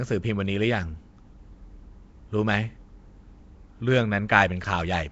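Speech with Nellymoser compression throughout, likely the Flash-era Nellymoser Asao codec: a rough, hissy halo with smeared, underwater vowels and nothing above 7.7 kHz, fitting about 32 kbps. Noise-filled empty bands give hiss rather than MP3-style swirl.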